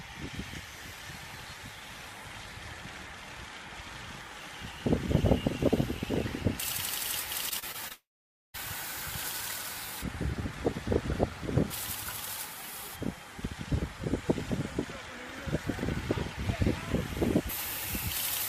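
Between 7.49 and 7.92 s the sound turns choppy and robotic, the signature of repeated packet loss: four short gaps, the longest about 31 ms, each patched by stretching the preceding sound, so roughly a fifth of that stretch is concealment. What separates it from a single dropout is the rapid alternation of real and patched audio. From 7.92 to 8.56 s a long network dropout likely follows. The last sound smears briefly into a fading buzz, then about 0.51 s of silence remains before the audio resumes with roughly 0.62 s missing. Unlike the stutter before it, this is one continuous gap, and the concealment gives up entirely instead of repeatedly filling small holes.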